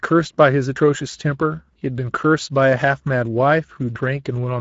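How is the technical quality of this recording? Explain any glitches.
The technical quality is limited by one fault that runs through the whole speech recording: Speex codec damage, plainly audible from start to finish.

Speex codec, throughout: the speech has a grainy, hoarse texture. This CELP coder spends too few bits rebuilding the excitation, so a noisy residue clings to the voice. The damage fits a mid-quality setting near 16.8 kbps. On a spectrogram, harmonics look smeared, the band above 4 kHz is a diffuse wash, and nothing appears above 7.7 kHz.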